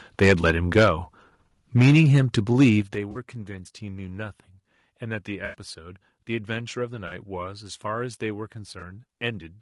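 Throughout the speech, the encoder, likely the low-delay AAC-ELD used in calls, codes about 500 frequency lines a frame with a low-delay window, at a rate that fits about 32 kbps. Low-delay AAC compression damage is plainly audible: voices sound rough and grainy, with noise filling the gaps between harmonics and a thin, synthetic top band.

From 0.22 to 0.88 s, microphone overload likely drives peaks about 7 dB past the converter's ceiling, and a small share of samples are flattened. The loudest syllables take on a harsh, crackling edge.

Within that span, from 0.41 to 0.44 s, AAC frame loss with concealment forces the decoder to rebuild about 20 ms from the last good spectrum, which fits a single lost frame. It leaves a brief smeared, noisy patch.

Overload returns from 1.76 to 2.69 s, again about 7 dB over, with the same crackle. At 1.82 s, the call software likely steps the microphone volume down by about 2 dB, and voice and background dip together. 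At 2.82 s, a second step of about 7 dB follows, just after the distorted stretch.

At 2.95 s, a sudden gain jump likely applies about 7 dB of digital gain reduction with no ramp. Level and background noise drop abruptly together and stay low to the end.

Further concealed frame losses smear the sound from 3.11 to 3.17 s and from 7.07 to 7.13 s, each about 40 ms. A longer gap of about 80 ms, from 5.45 to 5.54 s, gives a phasey, washed-out patch. A final 20 ms blip occurs at 8.79 s.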